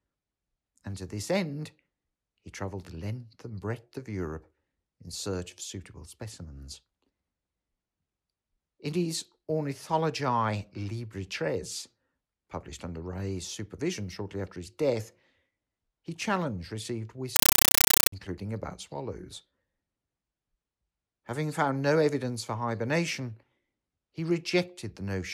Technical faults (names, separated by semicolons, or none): compressed stream played as audio